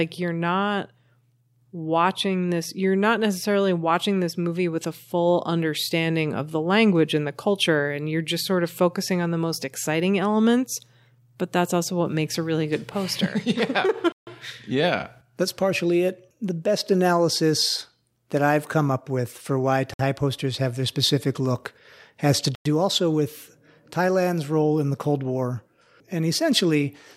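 Bluetooth stalls, where interference likely held up packets until the headphones' buffer ran empty, cut this speech to dead silence three times: 14.12 to 14.27 s (147 ms), 19.94 to 19.99 s (58 ms) and 22.55 to 22.66 s (102 ms), with the sound resuming after each gap.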